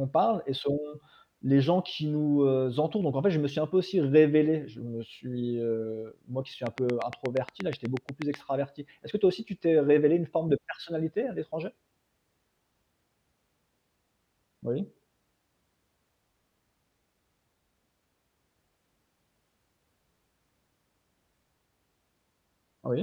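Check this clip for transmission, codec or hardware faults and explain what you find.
There is one fault, a train of clicks from 6.67 to 8.35 s, just after "heu moi qui suis". The likely cause is a faulty connection or nearby interference injecting a pulse at a regular 8.3 per second. That gives roughly fifteen similar ticks, standing about 10 dB above the speech and audible through it.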